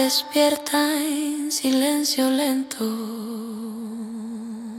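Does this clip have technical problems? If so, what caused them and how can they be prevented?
No, there are no technical faults to report in this clip, so there is nothing to trace back or prevent.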